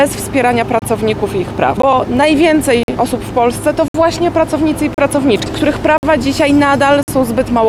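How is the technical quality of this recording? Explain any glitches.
The recording is marred by repeated gaps between stream segments: short hard-edged silences at 0.79, 1.82, 2.83, 3.88, 4.94, 5.98 and 7.03 s, lasting about 14 to 62 ms. They recur every second, matching 1-second segments whose timestamps leave small holes that the player fills with silence. Unlike a dropout, no audio is lost; the sound resumes exactly where it stopped.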